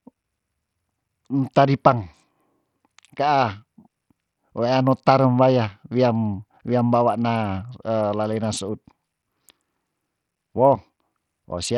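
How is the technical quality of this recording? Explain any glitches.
Quality is poor: the speech sounds gritty and dull from start to finish, with the treble thinning out and flickering and a rough, grainy noise riding on it. That points to likely Bluetooth SBC compression at a bit pool small enough to fit roughly 64 kbps. The upper sub-bands get few or no bits, so the highs drop away, while the remaining bands are coarsely quantised, leaving the grit and aliasing heard throughout.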